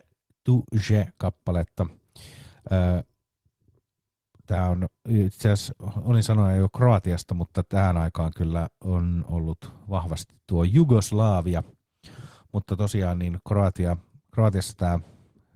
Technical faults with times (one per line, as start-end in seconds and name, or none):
none